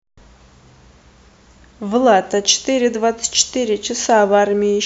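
No technical faults can be heard anywhere in this speech recording, with the signal holding steady throughout.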